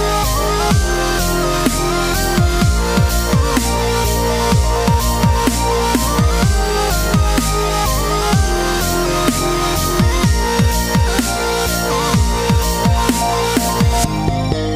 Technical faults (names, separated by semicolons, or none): none